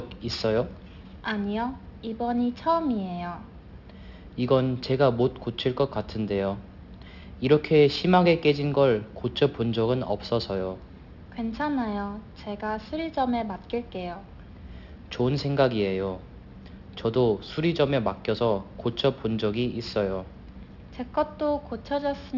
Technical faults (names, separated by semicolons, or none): aliasing